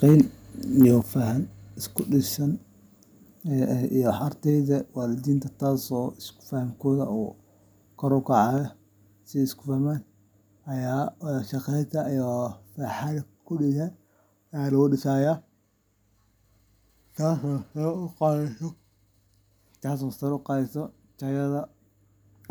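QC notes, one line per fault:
0.05 to 0.21 s and 0.81 to 0.89 s, microphone overload: the loudest peaks push about 2 dB past the converter's ceiling and get their tops flattened, so you hear a brittle, crackly edge on those bits. Only a small slice of samples is squared off, roughly 5 percent in the first burst and 4 percent in the second, which is why it's a quick rasp rather than constant fuzz. The second burst lands right before "faham ku dhisan". Likely cause is the mic input gain sitting too high.
1.02 s, microphone volume stepped down: just before "faham ku dhisan" the whole level, voice and background together, drops by about 6 dB in one abrupt step instead of easing down. Coming a moment after that second clipped burst, it sounds like the call software reacting to the overload and likely pulling the device's input volume down in a single move.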